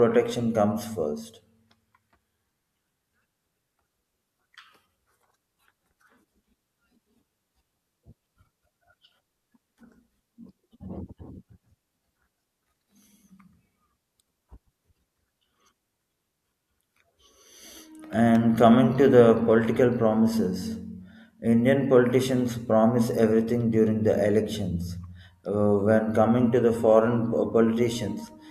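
No technical faults can be heard anywhere in this speech recording. Nothing in the signal chain calls for comment at any point.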